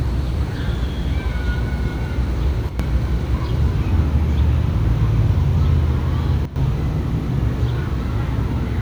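Sudden gain jumps at 2.69–2.80 s (about −7 dB) and 6.45–6.56 s (about −11 dB) drop sound and background together with no ramp, unlike a fade, likely from an unsmoothed gain step.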